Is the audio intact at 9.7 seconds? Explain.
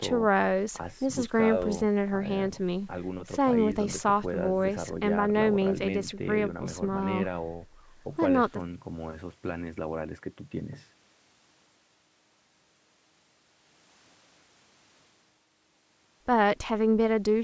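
Yes, at 9.7 seconds the speech is intact, with only the normal band limits of call microphone processing, which trims the lowest bass and leaves nothing above 8 kHz.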